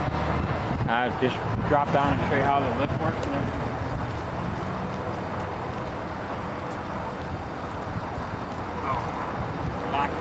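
No faults are heard anywhere in this clip.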